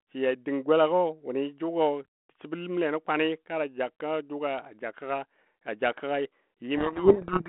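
From 6.76 s to the end at 7.48 s, the speech is buried under harsh, grinding distortion. This is a codec payload misread: the two ends disagree on the bit order of the G.726 code words, so the decoder rebuilds each sample from scrambled difference values.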